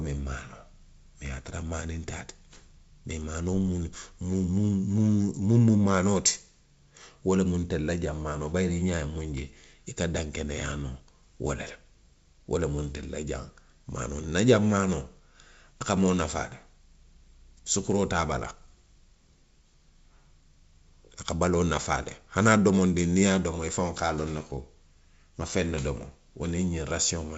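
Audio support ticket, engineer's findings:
Findings: no fault found in the speech audio, with the G.722 wideband path at 64 kbit/s working as expected.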